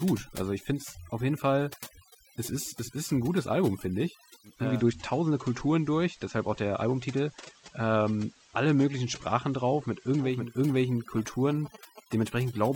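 Across the whole speech clip there is overdone noise removal. The reduction was set so hard that frequency bands near the estimated noise floor are pushed almost to nothing, and the quieter parts of the voice are cut with them. The background drops to near silence flecked with twinkling specks. Unlike a low-bitrate codec, the damage tracks the noise floor, so it is worst in quiet passages and pauses.

From 4.43 s to 10.59 s the sound shows digital radio blending to analogue: the receiver lost its digital stream and cross-faded, over about 405 ms, to the FM broadcast of the same station, then faded back. During that stretch a soft hiss rises, roughly 30 dB below the speech, and the level sinks by about 1 dB. That shift in hiss and level, with fades in and out, sets it apart from ordinary signal dropout.

From 11.18 s to 12.23 s come GSM signalling bursts, likely from a nearby 2G phone exchanging network signalling, with its radio pulses rectified by the audio circuitry. 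They make a galloping dit-dit-dit of short buzzes repeating at 216.7 Hz, sitting well below the speech. That fixed buzz rate and the grouped rhythm separate it from mains hum, which is steady, and from random clicks.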